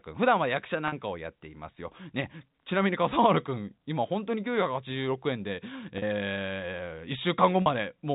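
At 0.88 to 0.92 s, 5.98 to 6.02 s and 7.62 to 7.66 s the speech briefly stalls into a held, slightly buzzy tone. Each is packet loss with pitch repetition: roughly 40 ms of audio, consistent with two 20 ms packets, went missing, and the receiver looped the last pitch cycle to bridge the gap. All of this is heard over the 4 kHz band limit of the G.711 telephone coding.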